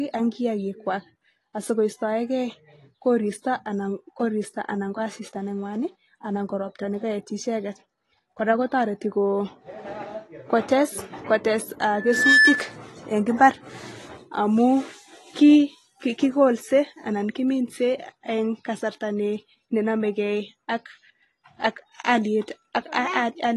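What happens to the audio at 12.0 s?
At 12.0 s a loudspeaker feedback squeal is under way. It runs from 11.91 s to 12.78 s. A microphone is picking up the loudspeaker it feeds, and at 1.7 kHz the loop gain exceeds unity, so that frequency reinforces itself on every pass. The tone swells over roughly 0.4 s into a steady whistle about 10 dB above the speech and cuts out at 12.78 s.

Underneath, the speech sounds dull and smeared, with nothing above 12 kHz and a warbling, fizzy texture on sibilants. That is likely AAC compression, specifically AAC-LC at a bitrate around 32 kbps. At that rate the encoder drops the high band and quantises the remaining spectral lines coarsely against its hearing model, leaving gaps and noise-filled bands that blur the detail.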